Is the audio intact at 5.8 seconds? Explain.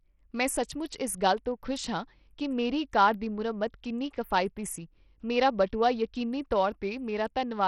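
No. At 5.8 seconds, as throughout the speech, the top end flickers and thins, with gritty grain and aliasing and nothing above 17 kHz. This is likely heavy Bluetooth SBC compression, which fits a starved bit pool around 64 kbps leaving the upper sub-bands with almost no bits.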